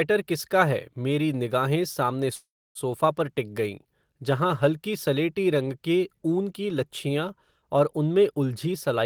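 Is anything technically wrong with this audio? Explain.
Yes. A call audio freeze runs from 2.35 to 2.78 s. Packets were likely held up in transit, draining the jitter buffer. The last sound stretches into a fading buzz or hiss, then 0.29 s of silence. Speech resumes 0.4 s late, with nothing lost.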